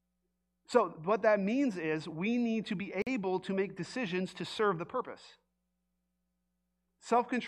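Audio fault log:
3.02–3.07 s, gap at a join of encoded pieces: a 47 ms gap with codec-smeared edges, leaving a shorter silent stretch, between "we need to be" and "to make decisions to", left by untrimmed encoder delay and end padding.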